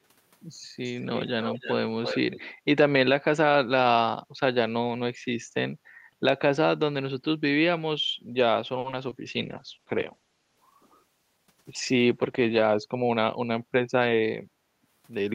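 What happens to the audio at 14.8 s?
The echo canceller clamped down on the microphone while the loudspeaker was active, so the background is gated by the echo canceller from 14.66 to 14.81 s. The room sound dips by about 9 dB for roughly 150 ms, then returns when the canceller releases.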